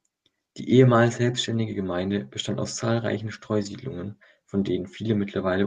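Speech, carried over a WebRTC call path whose Opus coding cuts the top end near 12 kHz. Just after "bestand aus zahlreichen", from 3.61 to 3.67 s, the sound turns briefly rough and noisy. This is a lost packet rebuilt from error correction: the decoder played low-bitrate backup copies, about 40 ms, which fits two 20 ms packets.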